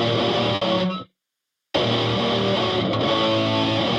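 A burst of packet loss interrupts the audio between about 0.55 and 0.63 s. For roughly 60 ms the receiver had no fresh data, so it kept extending the last sound it received and faded that concealment down as the gap continued, leaving a short held tone or hiss in place of the real signal. Playback then resumes with about 60 ms of the original audio skipped, so the sound jumps forward slightly at the join.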